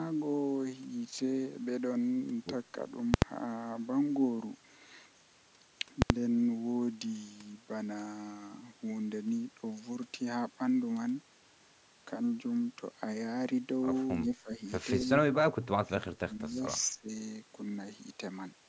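At 3.14 s and again at 6.02 s the speech is interrupted by invalid numbers at full scale, each lasting 80 ms, to 3.22 s and 6.10 s. A processing calculation produced infinite or undefined values, and these were forced to the maximum positive or negative sample value. The output sits flat at one extreme value, far beyond the speech peaks, for the whole block. Each event is heard as a very loud pop at its start and another at its end, with no sound between.

From 14.42 s onward the speech drops out in pieces, most likely because it was suppressed in double talk. The echo canceller apparently could not separate the near talker from the loudspeaker echo while both sides were speaking, so it attenuated the signal. The dips fall at 14.42–14.60 s (about 15 dB), 15.05–15.10 s (about 5 dB), 15.49–16.08 s (about 30 dB, nearly gone), 16.25–16.62 s (about 20 dB) and 16.90–17.10 s (about 20 dB). The result is a choppy, fading voice.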